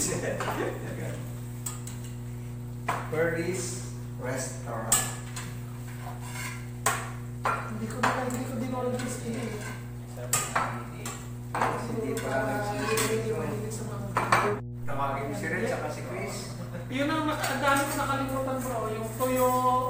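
Mains hum runs from start to finish: a steady low tone at 60 Hz sits under the whole recording, with low harmonics stacked above it. It is strong, only a little below the level of the wanted sound, so it never drops out of earshot. The power line has leaked into the signal path, most plausibly through a ground loop between connected equipment or magnetic pickup from a nearby transformer.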